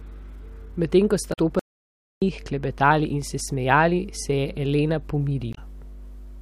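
A speech recording with a steady mains hum underneath the whole way through, sitting at 50 Hz and fairly prominent, roughly 15 dB below the talker. That's the power line leaking into the signal, most often via a ground loop or a transformer sitting too close to the gear. At about 1.29 to 1.39 s and again at 5.50 to 5.58 s you get short glitches, the signature of damaged data in a compressed stream: the decoder hits corrupted frames, loses its place and hunts for the next valid header, usually skipping a sliver of audio as it does. Then there's an audio dropout to silence from 1.59 to 2.22 s, about 0.62 s of dead silence with no room tone at all, before the sound picks back up on "klepetali in se smejali". The likely cause is the input going away for a moment, through a lost link, an unplugged device or a stray mute, while the recorder kept writing, so whatever was said in that gap is gone.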